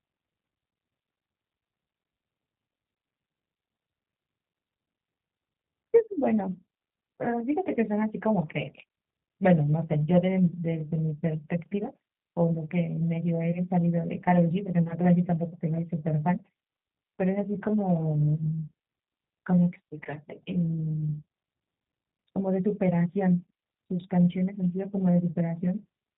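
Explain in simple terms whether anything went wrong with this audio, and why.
The speech went through the G.729 codec, a phone-call compression scheme that rebuilds the voice from a rough model instead of sending it as recorded. Throughout the clip, nothing above about 4 kHz survives, so the voice sounds muffled, slightly rough and synthetic.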